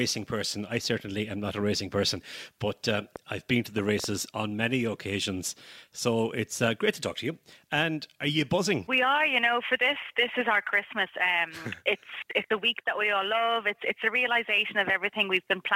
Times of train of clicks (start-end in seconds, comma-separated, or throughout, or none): 3.16-4.05